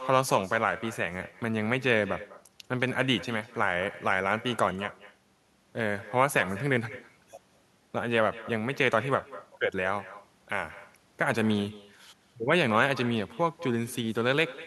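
From the first second to the end, every bit of speech has a faint shadow trailing it by around a fifth of a second. That's echo with no canceller: the far end is playing the call over a loudspeaker, its microphone grabs that playback, and nothing strips it out before it comes back down the line. The returning copy sits about 17 dB below the direct speech and sounds thinner.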